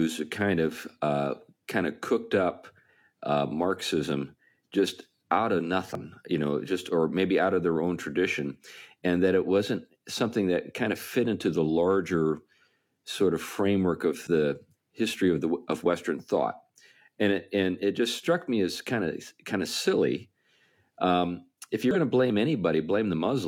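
Damaged data in a compressed stream hits this speech clip at 5.95–6.00 s after "just out of", 14.23–14.27 s after "sort of framework", and 21.91–21.96 s after "if you're": corrupted frames make the decoder lose sync and hunt for the next header, giving brief glitches heard as a chirp, squawk, click or short hole.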